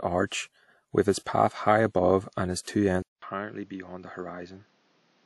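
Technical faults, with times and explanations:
Throughout: transcoding between lossy codecs. Nothing is present above 11.8 kHz, and two different sets of compression artefacts sit on top of each other. This likely comes from an MP3 encode near 96 kbit/s being re-encoded as WMA near 64 kbit/s, which compounded both codecs' damage.
3.02 to 5.26 s: input switched to a poorer device. Right after "above and its two", a 200 ms silence is followed by sound cut off above 6.9 kHz. It is about 10 dB quieter, with new background noise roughly 35 dB below the signal, likely from a change to a narrower-band microphone.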